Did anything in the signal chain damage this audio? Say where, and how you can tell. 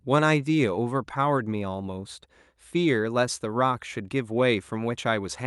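No, nothing in the signal chain damaged this speech. It went through a WebRTC call path, and the way the top end stops at about 12 kHz points to an Opus codec working at its normal settings.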